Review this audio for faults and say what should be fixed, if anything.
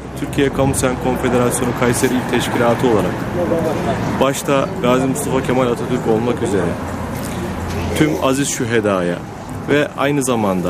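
Nothing here needs fixing; no faults were found.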